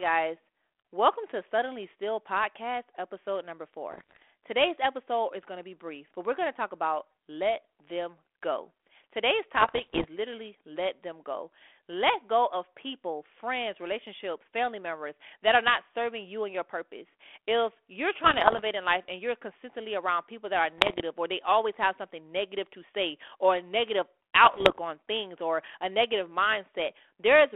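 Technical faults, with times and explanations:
3.89–4.22 s, 9.54–10.06 s, 18.19–18.62 s, 20.78–21.01 s and 24.44–24.79 s: bit errors on an ADPCM link. Speech breaks into pops and rough bursts with brief level jumps. Roughly one to one and a half bits in a hundred flip. Each one knocks the decoder's step size and prediction off, so the damage rings on briefly. The narrow telephone band around these bursts points to a 32 kbit/s G.726 link.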